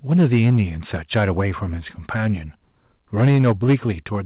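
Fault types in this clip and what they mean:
Microphone overload: input gain was likely set too high, pushing peaks about 3 to 6 dB past the converter's limit, so the loudest passages crackle harshly.
Microphone volume stepped down: the call software likely lowered input gain by 3 dB in one step at 3.28 s, so the level drops abruptly during distortion.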